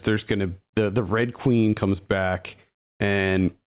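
Across the whole clip the level breathes, with a swing of around 10 dB. The speech sounds squashed, loud and quiet syllables sitting unnaturally close together. This gain pumping is likely caused by the microphone gain being set far too high, so a fast limiter or compressor keeps pulling it down on every loud moment and releasing it in the gaps, all heard through a narrow band with nothing above 4 kHz, which fits a G.711 mu-law call codec.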